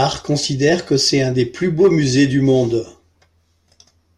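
Nothing goes wrong anywhere in this short bit of speech, so there's no fault to point out at any moment.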